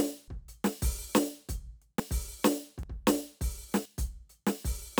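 Sudden forward jumps in the music land at 0.28, 2.00, 2.83 and 3.85 s, skipping roughly 150, 50, 50 and 100 ms. This is likely a dropped buffer (overrun): audio was overwritten before being read, so the two sides are spliced directly.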